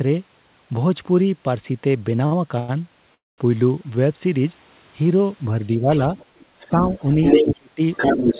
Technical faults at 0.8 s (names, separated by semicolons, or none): none